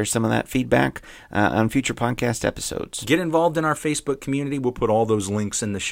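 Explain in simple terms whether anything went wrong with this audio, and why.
From 4.64 to 5.59 s the speech suddenly drags and drops in pitch, about 6% slower and roughly a semitone lower, then snaps back. This is a drift correction step, likely from software nudging playback speed to keep two clocks in line.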